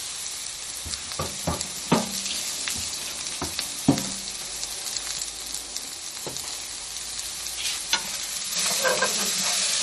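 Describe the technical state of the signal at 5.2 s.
At 5.2 s the signal is most likely suffering from MP3 compression, present throughout the clip. Short of bits at what sounds like about 40 kbps, the encoder cuts everything above 12 kHz and drops weak frequency lines, leaving a dull, plainly audible watery swirl on the sound.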